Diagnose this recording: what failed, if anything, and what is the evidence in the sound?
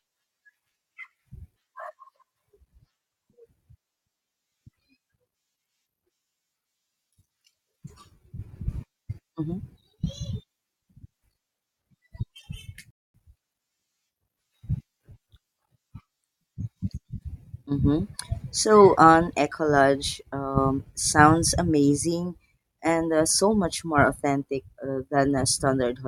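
The speech cuts to silence at 12.91 s and picks up at 13.14 s exactly where it stopped, with nothing missing but about 0.24 s of dead air added. That is a rebuffering stall at the playback stage: the player exhausted its downloaded audio over the network and waited for more.

At 17.67 s the speech level falls abruptly by about 6 dB for roughly 50 ms, then returns to full level at 17.72 s. The likely cause is one channel dropping out, probably in the wiring or driver path, so the mono sum briefly carries only half the shared signal.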